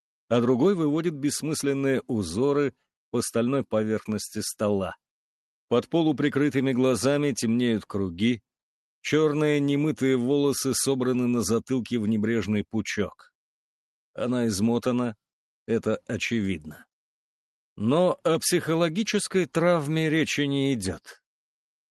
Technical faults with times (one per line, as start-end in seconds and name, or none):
none